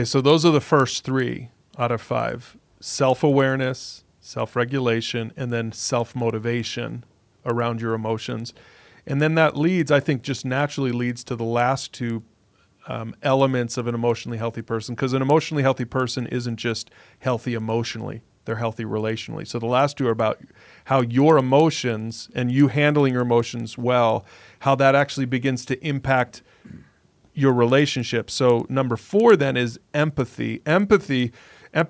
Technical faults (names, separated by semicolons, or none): resampler restarted on every block